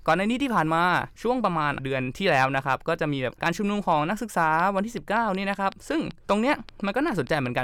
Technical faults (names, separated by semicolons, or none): train of clicks